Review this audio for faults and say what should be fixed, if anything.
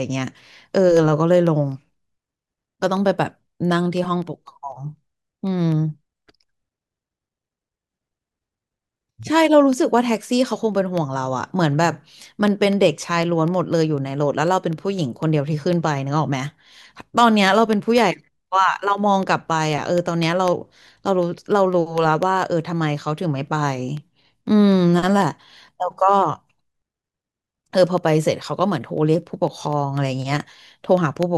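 Periodic USB or driver dropouts run from 0.22 s to 31.23 s. A tick sounds every 0.25 s, four per second, during the speech. Each one is a tiny gap, a fraction of a millisecond of audio replaced by silence. That comes to roughly 150 gaps. The even spacing points to a background task stalling the USB bus or audio driver on a fixed schedule. Find and disable that task, or raise the driver buffer size, to prevent it.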